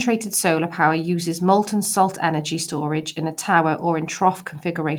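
No technical faults are audible.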